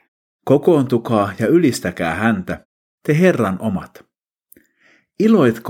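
A speech clip with no technical faults to report.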